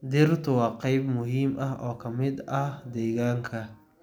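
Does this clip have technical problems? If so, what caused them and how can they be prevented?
No, this clip has no technical problems, so there is nothing to prevent.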